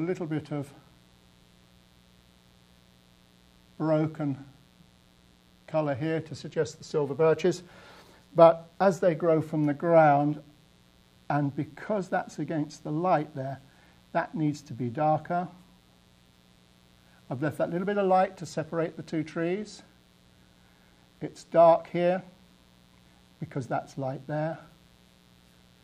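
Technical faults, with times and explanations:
Throughout, mains buzz: there's a steady, raspy buzz sitting under the whole thing, built on 60 Hz, so it points to North American style power. It's not a clean hum. Something like a dimmer or rectifier, or a missing shield, is letting sharp switching spikes in twice per mains cycle, and those spikes spread energy into harmonics stacked up to several kHz. That's where the rasp comes from. It sits about 35 dB below the signal, so it's quiet.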